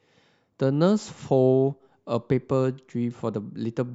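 No technical faults are audible anywhere in the speech recording. Nothing in it calls for a timestamp or comment.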